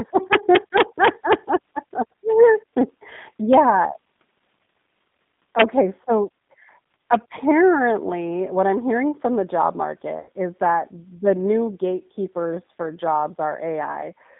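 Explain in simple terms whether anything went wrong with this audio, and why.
Three things went wrong. Throughout the 14-second clip, the speech passed through the G.729 codec, a low-bandwidth phone-call codec that rebuilds the voice from a simplified model and discards everything above about 3.6 kHz. The damage is clearly audible: speech sounds muffled, slightly rough and synthetic.

From 0.33 to 1.33 s, an integer overflow occurred. The loudest moments exceeded the largest number the system could store, so instead of being capped, they wrapped around to the opposite extreme. Each peak is heard as a harsh, violent crack, much sharper than ordinary distortion.

From 10.19 to 10.28 s, about 80 ms of audio was lost in transit: VoIP packet loss concealed by the speech codec. The decoder filled the gap by extending the last sound it had, producing a brief buzzy tone or coloured noise that fades, and the voice stays weak for a moment afterward.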